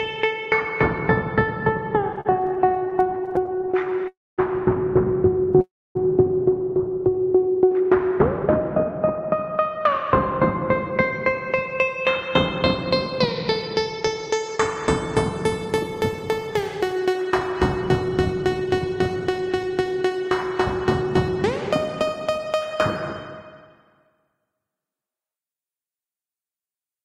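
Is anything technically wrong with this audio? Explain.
Yes, there are three kinds of fault.

From 2.13 to 4.08 s the sound drags and stutters through 38 brief repeated stalls of up to 41 ms, filling about a fifth of that span. Late packets kept emptying the jitter buffer.

At 4.08 to 4.40 s and again at 5.61 to 5.97 s, a call audio freeze holds the sound, fading to silence for 220 and 270 ms before it resumes. The likely cause is packets held up in transit.

From 8.6 to 24.6 s the everyday sound runs at 104% speed without a pitch change. This is a jitter buffer speed-up trimming roughly 0.7 s of backlog.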